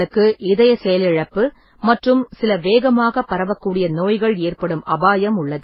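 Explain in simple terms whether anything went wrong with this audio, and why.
Something did go wrong: the speech sounds dull and watery across the whole clip, with nothing above about 5.5 kHz. That's most likely transcoding between lossy codecs, where the audio was squeezed by one compressor after another, each piling its own smearing on top of the last.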